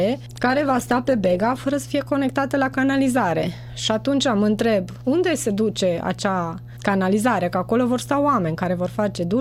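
From start to finish, a ground loop or nearby transformer is feeding the power line into the signal, producing mains hum. It sits at 60 Hz, with some of its low harmonics above it, roughly 15 dB below the sound itself. That makes it a steady, low drone that never lets up beneath everything, most exposed wherever the sound thins out.

From 0.31 s to 1.75 s there is a call bitrate drop. The call's bandwidth estimate collapsed, and the encoder was forced down from full quality to a starved rate, which fits a fall from around 128 kbps to something near 18 kbps. It stays at its lowest for about 1.4 s. With so few bits, the coding turns coarse and the top end is trimmed away, so the sound goes muffled, rough and watery until the rate recovers at 1.75 s.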